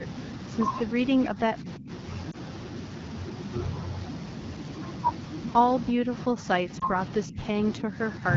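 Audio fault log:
1.33 to 8.23 s (at 1.33–1.9, 5.93–6.12, 6.32–6.97, 7.26–7.38, 7.8–7.99 and 8.19–8.23 s), speech suppressed in double talk: the level sinks, deepest near 1.33–1.9 s at about 25 dB and as little as about 5 dB in places, likely because the echo canceller clamped down while both sides spoke. The waveform envelope pinches in.
2.31 to 2.36 s and 6.80 to 6.85 s, lost AMR speech frames: a single 20 ms frame drops out each time, so the decoder repeats its last settings at reduced gain. This gives a brief dip or warble. A spectrogram shows a short smeared, flattened stretch of harmonics, and the waveform has a small notch.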